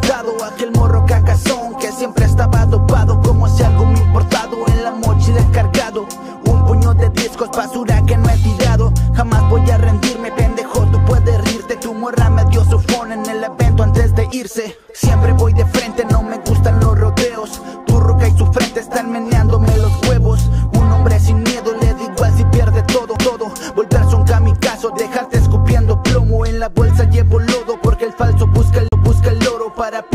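A brief tick with an abrupt jump in the sound comes at 23.16 s, and a longer dropout of about 40 ms at 28.88 to 28.92 s. This is a CD skip: the laser jumped to another turn of the disc's spiral, and the player muted briefly before resuming from a different point.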